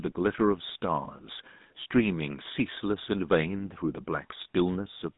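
From start to finish the speech carries the coarse signature of the GSM full-rate codec, whose damage is plainly audible here, consistent with the 13 kbps full-rate coder. It rebuilds each stretch of speech from a vocal-tract filter excited by a thinned, regularly spaced pulse train, producing a buzzy, gravelly roughness. A spectrogram shows a band from about 150 Hz to 3.7 kHz, an empty region above 3.8 kHz, and smeared, grainy harmonics within the band.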